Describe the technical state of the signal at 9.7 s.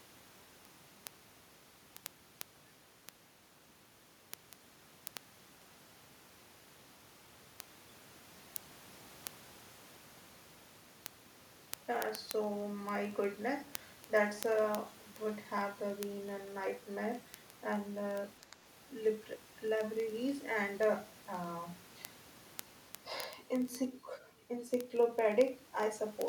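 At 9.7 s the speech carries word clock ticks, which run from 0.11 s to 26.28 s. The receiving device's clock is not locked to the sender's, and they drift by roughly several hundred parts per million, so about every 30 ms a single sample is dropped or repeated. The result is a sharp tick of uneven strength at a steady rate. That steady rhythm of one-sample glitches, with no audible gaps, distinguishes it from random vinyl-like crackle or buffer dropouts.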